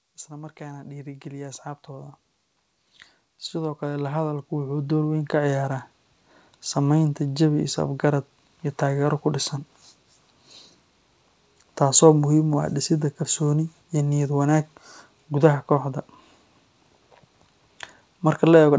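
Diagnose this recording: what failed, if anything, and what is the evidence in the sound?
Automatic gain rising, in the call processing stage. From 0.05 to 2.21 s the level climbs by about 8 dB. From 3.51 to 5.74 s it climbs by about 10 dB. Speech and background swell together. The gain control judged the input too quiet and raised it slowly.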